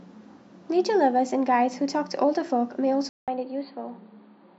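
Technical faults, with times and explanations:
3.09–4.59 s, input switched to a poorer device: After a 0.19 s silence, the speech turns dull and boxy, with nothing above 4.7 kHz. It drops about 5 dB and gains a faint new noise floor. This likely comes from recording switching to a narrower-band microphone.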